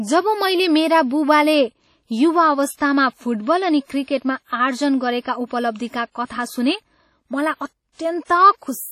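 Throughout the speech, the sound rings and smears. Quiet detail washes into a hiss that rises and falls with the voice. Nothing reaches above 18.8 kHz. The cause is likely WMA compression. This transform codec codes the audio in long blocks. Its quantisation noise therefore spreads over tens of milliseconds around each sound, and weak spectral lines are dropped to zero. The heavy damage points to a low bitrate, around 32 kbps.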